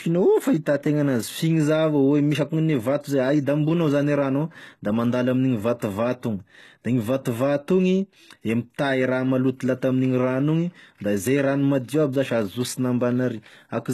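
Throughout, the speech has a gritty, metallic treble. S sounds come out lispy, and nothing is present above 12.3 kHz. This is likely HE-AAC compression at a very low bitrate, around 16 kbps. The upper band is rebuilt from copied lower bands rather than coded, so its harmonics don't align. That synthetic shimmer, not a dull muffling, distinguishes it from plain low-pass filtering.

At 5.79 s, just after "ao da mandalo amin'igny", pre-echo appears. A brief hiss of about 19 ms leads into an attack, which sounds softened. The codec spread quantisation noise across the whole block, including the quiet moment before the onset. Because the noise comes before the transient, it can't be a click or a reverb tail.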